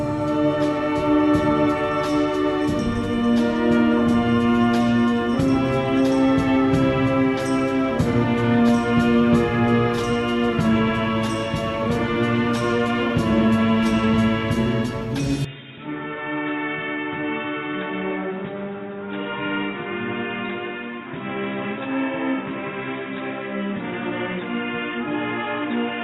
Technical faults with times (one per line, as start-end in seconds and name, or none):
15.45-26.03 input switched to a poorer device